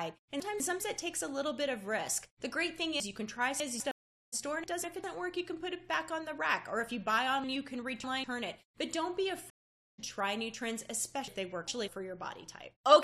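A jumbled stretch at 0.4–0.8 s comes from chunks out of order. A 200 ms block arrives one slot late and plays after the block that should follow it, leaving hard joins. The same scramble recurs at 3.0–3.8 s, with a block three slots late.

At 3.91 s the audio drops out for 410 ms and comes back at 4.34 s, softly at first and roughly 0.4 s further on. This is a stream reconnect. The connection broke, and a fresh decoder picked up later in the stream, fading in its first frame.

Further out-of-order chunks garble 4.64–5.04 s (one late) and 7.44–8.24 s (three late).

A second reconnect silences 9.50–10.0 s for 480 ms. The audio again resumes roughly 0.4 s ahead.

The last jumble, at 11.28–11.88 s, has a block two slots late.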